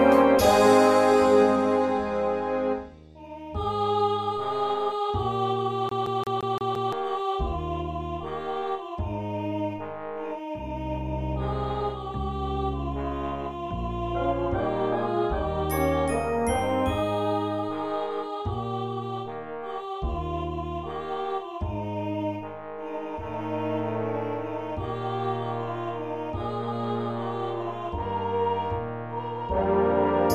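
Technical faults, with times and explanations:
5.89 to 6.93 s, CD stuck on one turn: the laser jumps back one track each rotation, so a 0.17 s fragment repeats six times with brief mutes, a rapid even stutter.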